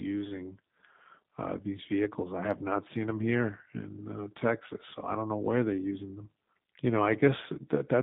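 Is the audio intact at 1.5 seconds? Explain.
No. At 1.5 s the speech carries G.729 codec damage throughout, narrowed to about 150 Hz–3.7 kHz and rebuilt from filter and pulse parameters, sounding rough and synthetic, consistent with 8 kbit/s.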